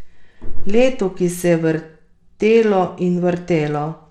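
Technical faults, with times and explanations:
Throughout, Bluetooth SBC compression: the speech has a gritty, grainy overlay and thin, flickering treble, with nothing above 17 kHz. The likely cause is a starved SBC bit pool, which fits about 96 kbps, leaving top sub-bands nearly bitless and the rest coarsely quantised.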